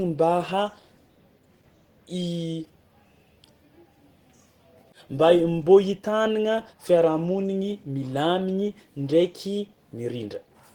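Throughout the speech, a low-rate Opus compression stage, likely running in its hybrid speech mode at a rate that fits about 16 kbps, has thinned the detail it keeps. The sound comes out plainly muffled and hoarse, though content still reaches 20.1 kHz.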